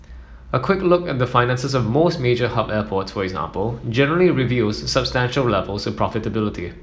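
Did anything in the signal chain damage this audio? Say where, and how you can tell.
No, nothing in the signal chain damaged this audio.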